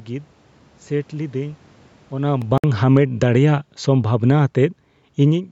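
Speech that sinks twice as the automatic gain falls: about 8 dB from 2.13 to 3.20 s, then about 3 dB more from 3.80 to 5.47 s, with the background sinking too because the gain control judged the input too loud or its noise too strong. At 2.42 s a tick marks a block of digital silence of about 0.67 ms, which fits a 32-sample block. The signal cut out and back with no fade. From 2.58 to 2.64 s a 58 ms hole cuts the sound, and it resumes as if it had kept playing. This is likely a Bluetooth dropout, consistent with a few lost packets. The call microphone processing leaves nothing above 8 kHz.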